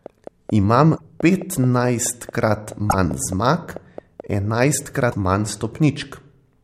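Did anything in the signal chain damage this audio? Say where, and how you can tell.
Yes. A train of clicks runs from 0.06 to 4.21 s: about 20 same-shaped pops at a regular 4.6 per second, about 5 dB above the signal. It is likely interference in the analogue wiring. Its steady spacing, even through pauses, sets it apart from codec damage.

Broken MP3 bit reservoir faults appear at 0.96–1.01 s, 2.89–2.94 s and 5.11–5.14 s. Each is a brief chirp or hole with a jump ahead, spanning one or two 26.1 ms frames. The likely cause is frames lost from the encoded file, so the following frames decode with borrowed data from the wrong frame.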